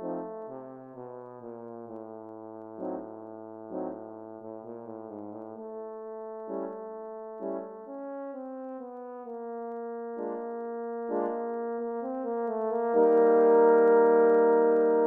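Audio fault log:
0.14–15.05 s, clock slip clicks. A faint, regular ticking runs through the sound, about twenty per second, close to a soft rattle. Each tick is one sample dropped or repeated. The likely cause is two unsynchronised clocks differing by roughly 500 ppm.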